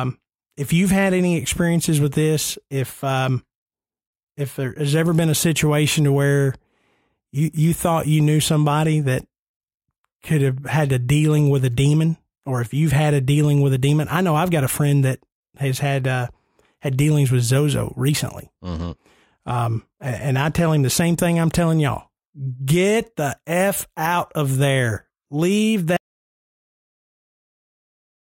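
The input was likely lost, so the recorder kept writing silence: at 25.97 s, right after "out of there leave", the speech cuts off in an audio dropout to silence. The gap is silent with no room tone and lasts to the end.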